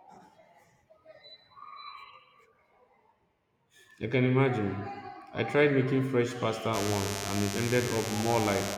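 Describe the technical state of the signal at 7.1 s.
Mains buzz runs from 6.72 s to 8.78 s: switching spikes tied to the 50 Hz mains leak in, laying a steady, raspy buzz roughly 10 dB under the speech.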